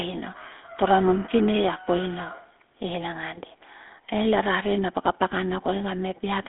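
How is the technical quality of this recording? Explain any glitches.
Technical quality is poor: the speech runs through GSM full-rate coding for the whole clip. Only a telephone-like band of roughly 250 Hz to 3.5 kHz survives, with nothing above 3.8 kHz. The coder rebuilds the voice from a vocal-tract model excited by sparse, regularly spaced pulses, which fits a 13 kbps rate and leaves a plainly audible buzzy, gravelly roughness. Simple band-limiting would sound muffled but clean; this grit marks the codec.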